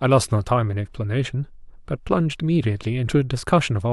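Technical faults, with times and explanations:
0.86 s, damaged data in a compressed stream: a brief glitch, as the decoder misreads corrupted frames and resyncs at the next header.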